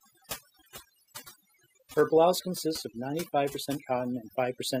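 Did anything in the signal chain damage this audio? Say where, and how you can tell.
Yes. Overdone noise removal at the call-processing stage affects the whole speech clip. Between phrases the background drops to near silence, flecked with twinkling specks, and the voice's quieter components get suppressed along with the noise. The suppressor is set too aggressively: any frequency band close to its noise estimate is pulled far down or shut off. A spectrogram would show isolated speckles in dark gaps and a ragged, hollowed texture inside the speech.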